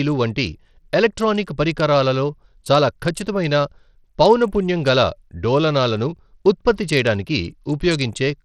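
Throughout the speech, the treble flickers in and out and a gritty, coarse noise rides on the sound, plainly audible, which fits a low-bitrate stream around 80 kbps. Likely cause: Bluetooth SBC compression, whose starved upper sub-bands flicker and alias rather than rolling off smoothly like a simple low-pass filter.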